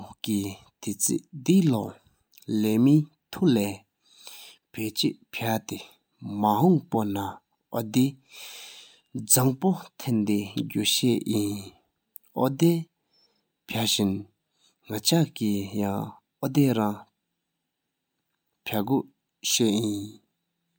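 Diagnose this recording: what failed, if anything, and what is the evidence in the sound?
Nothing failed: the speech recording carries no audible evidence of a fault at any stage of the chain.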